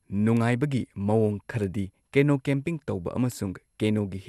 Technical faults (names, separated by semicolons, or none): generation loss; bit error spike